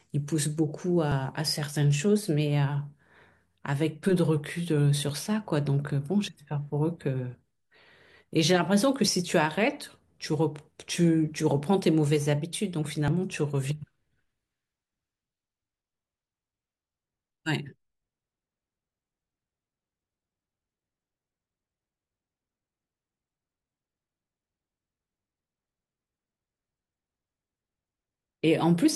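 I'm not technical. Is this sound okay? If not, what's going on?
No. Three tiny clicks or skips cut into the speech, at about 1.12, 5.1 and 13.08 seconds, as if a sliver of sound went missing. This is an overlap between stream segments. The audio arrives in 4-second pieces, and at these joins two pieces claimed the same stretch of time. The player trimmed the supposed duplicate, but the sound was not really repeated, so about 5 to 17 milliseconds were lost each time and the waveform jumps.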